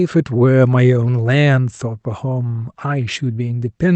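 Nothing in this speech recording sounds faulty.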